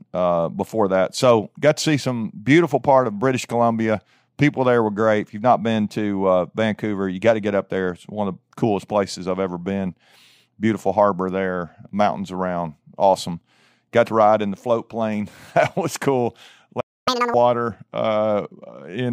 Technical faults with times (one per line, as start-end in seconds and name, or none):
16.80-17.08 playback stall
17.08-17.34 catch-up at higher speed